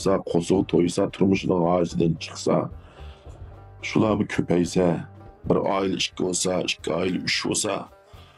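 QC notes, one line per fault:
0.0–5.64 s: de-emphasis applied wrongly. A treble-cut filter meant to reverse pre-emphasis was applied where none existed or applied twice, tilting the response smoothly downward to about 11 dB lower at 10 kHz than at 1 kHz, so the sound turns dull and muffled.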